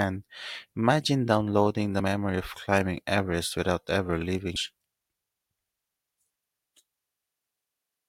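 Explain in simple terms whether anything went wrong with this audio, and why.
Right after "without ever leaving", at about 4.56 to 4.59 s, there's a brief glitch lasting roughly 30 milliseconds. That's damaged data in a compressed stream. A small chunk of the compressed file got corrupted, so the decoder couldn't read those bytes properly. It briefly lost its place and hunted for the next clean frame to lock back onto, and that stumble is the odd little glitch you hear.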